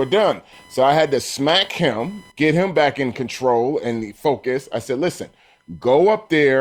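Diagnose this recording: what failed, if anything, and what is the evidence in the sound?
The failure is in the analogue wiring: the audio circuit shares a ground with the computer, and load changes from the processor, graphics or mouse shift that ground, injecting computer activity noise. It runs through the whole recording as a faint buzzing chirp with a whine near 1 kHz, sitting roughly 35 dB below the speech. It rises and falls with the machine's workload, not with the talker, which points to electrical coupling rather than anything acoustic.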